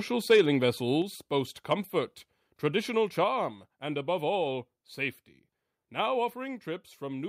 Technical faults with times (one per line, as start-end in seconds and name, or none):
0.30-0.41 microphone overload
1.02 microphone volume stepped down
3.24 microphone volume stepped down